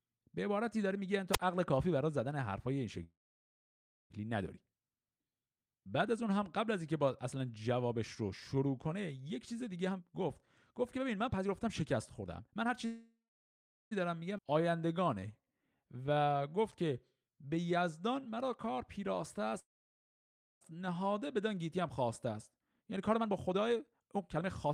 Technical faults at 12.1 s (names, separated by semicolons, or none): jitter buffer speed-up